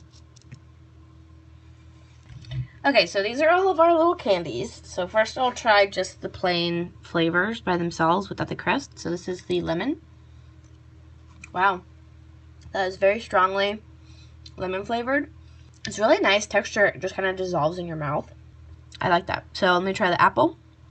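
Nothing stood out on listening to the audio as it came through the call path.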